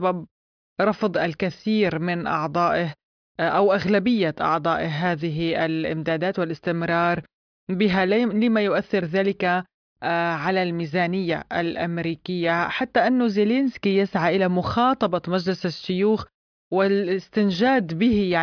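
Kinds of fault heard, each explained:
Nothing here sounds off at all: the speech comes across steady and intact, with no dropouts, clicks or glitches to point to.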